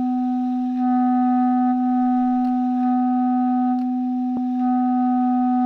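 At 4.37 s compressed frames are skipped: about 150 ms of audio vanishes as whole 26.1 ms frames drop out, heard as a brief smeared blip with a visible jump in the spectrogram.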